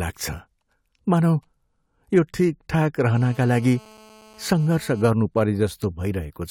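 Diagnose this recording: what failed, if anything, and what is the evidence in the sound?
A GSM phone buzz enters the analogue wiring stage from 3.15 to 5.08 s, just after "यो ठिकठाक". It is a steady, raspy 217 Hz buzz with dense harmonics, about 26 dB below the speech. A nearby phone on a call bursts its transmitter. The circuitry rectifies those pulses.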